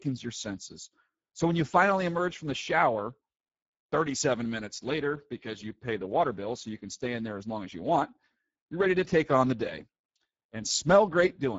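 Speech runs through the whole clip with plainly audible Speex codec damage. The voice has a grainy, hoarse quality, because this CELP coder has too few bits to model the excitation signal accurately, and the residual error comes through as roughness. The density of that artefact fits a low setting of around 10 kbps. Content stops at 7.7 kHz.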